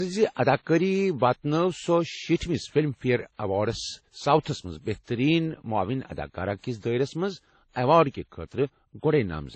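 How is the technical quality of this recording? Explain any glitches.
The technical quality is poor. The speech carries a layered coding damage from start to finish.

Transcoding between lossy codecs runs through the whole clip. Nothing is present above 8.4 kHz, so the speech sounds dull and boxed in. On top of that, the artefacts of the different codecs are heard together. This likely comes from audio passed through several lossy codecs in turn. The mix fits low-rate MP3 and WMA stages followed by AAC. Each later encoder kept the earlier damage and added its own, and the lowest cut-off stayed.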